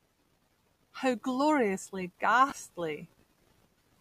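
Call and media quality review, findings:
Chunks out of order, 2.5–2.52 s: brief jumbled flutter in the speech. A 10 ms chunk plays one chunk late, swapped with its neighbour, likely in the jitter buffer or write path. Unlike a dropout or packet-loss concealment, no audio goes missing or is smeared; the same material is reordered, with three hard joins.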